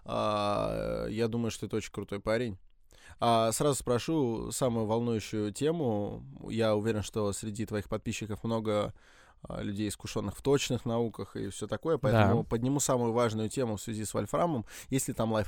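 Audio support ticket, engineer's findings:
Speech signal checked throughout with no audible technical fault found; level, continuity and timing hold steady across the whole recording.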